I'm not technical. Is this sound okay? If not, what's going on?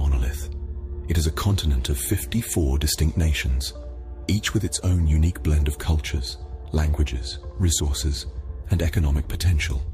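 Yes, it's fine: nothing audible has gone wrong anywhere in the clip.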